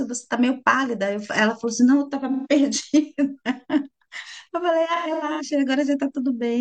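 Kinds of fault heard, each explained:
AAC frame loss with concealment: dropped frames get patched from the last good spectrum, leaving smeared, phasey little patches near 2.3 s and scattered across 5.0 to 5.4 s.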